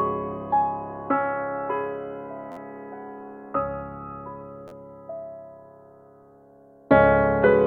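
A brief buzzy stutter breaks into the music twice, at 2.52 to 2.57 s and again at 4.68 to 4.71 s, where the same tiny slice sounds over and over with hard joins. This is a repeated buffer: fresh audio arrived late, so playback looped its last block, four extra times at the first spot and three at the second. Each repeat lasts about 11.6 ms, which fits a 512-sample buffer, and roughly 50 ms and 40 ms of music go missing.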